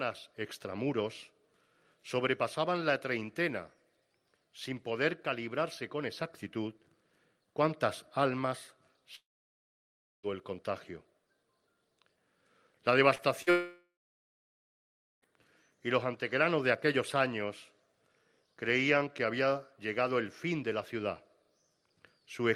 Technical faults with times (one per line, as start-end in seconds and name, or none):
9.15-10.26 long network dropout
13.15-13.49 short concealed packet loss
13.50-15.25 long network dropout